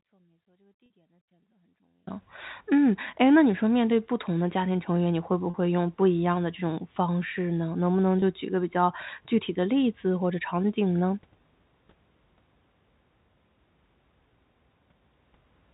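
Right from the start the speech is already gone, and it stays that way until about 2.07 s. What's left is a faint trace sitting roughly 35 dB below normal level, and then the full signal snaps back abruptly instead of fading in. That's an audio dropout to a faint residue, likely a break upstream while the path after it stayed live, so a little leakage kept coming through.

Next come three packet losses with pitch repetition. The first, at 0.86–0.90 s, is buried inside that dropout. The other two sit at 5.50–5.54 s and 8.20–8.22 s. The gaps of about 40 ms and 20 ms fit two lost 20 ms packets and then one. The receiver filled each hole by repeating the last pitch cycle, which gives a brief held, buzzy smear before normal speech picks up again. Underneath all this the G.711 phone coding carries on normally, with its narrow telephone band.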